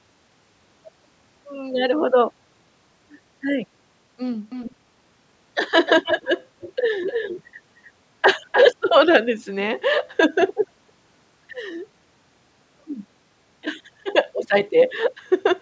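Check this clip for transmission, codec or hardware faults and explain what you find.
One fault shows up, repeatedly: echo leak at 4.5–4.75, 5.86–6.29, 6.6–6.73, 7.06–7.43, 8.52–8.66 and 10.48–10.55 s. A delayed copy of the speech trails it by about 0.3 s, sitting roughly 5 to 20 dB below it. The likely cause is a far-end echo canceller not fully removing loudspeaker sound picked up by its microphone.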